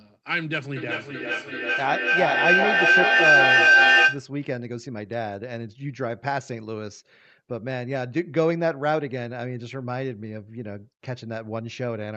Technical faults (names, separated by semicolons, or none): feedback howl